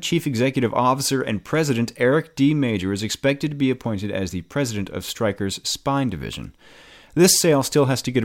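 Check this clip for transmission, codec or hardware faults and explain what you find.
No faults found.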